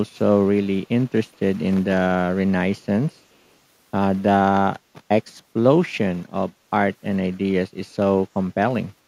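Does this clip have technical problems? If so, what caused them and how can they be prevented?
Yes. A brief echo leak occurs from 1.33 to 1.37 s, where a very faint copy of the speech returns 426 ms late. This is likely loudspeaker sound that the far end's echo canceller failed to remove. Headphones or a better-tuned echo canceller would prevent it.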